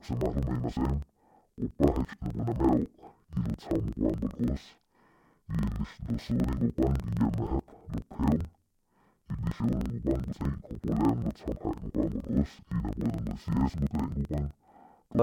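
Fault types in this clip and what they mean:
Interleaved audio read as planar: throughout the speech, each block of alternating left and right samples is split so its first half feeds one channel and its second half the other. Each half plays at half speed, dropping the voice a full octave (about 12 semitones) so it sounds doubled and choppy. Blocks last about 42.7 ms, which fits a 2048-sample block. A spectrogram shows harmonics at half their expected spacing with vertical seams repeating at 23.4 Hz, and the waveform shows matching discontinuities every 42.7 ms.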